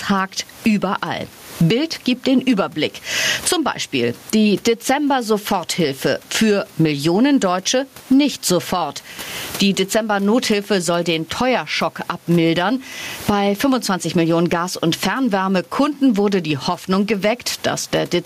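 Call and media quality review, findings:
Gain pumping throughout: loud and soft parts pulled closer in level, sound squashed, around 20 dB swing. Likely mic gain way too hot, fast limiter clamping each peak.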